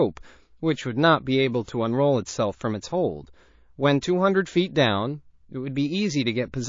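Throughout, the speech sounds watery and swirly, with s sounds chirping metallically, likely from MP3 compression at a low bitrate around 32 kbps, not simple low-pass filtering. From 1.65 to 1.68 s, pre-echo: a hiss about 24 dB above the background rises just before an attack. The codec's long block, apparently never switched to short blocks, spread its noise backwards, unlike a click or ordinary background noise.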